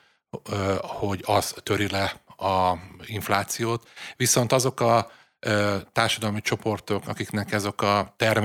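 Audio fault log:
No fault is heard anywhere in the speech. Nothing in the audio calls for an entry in this log.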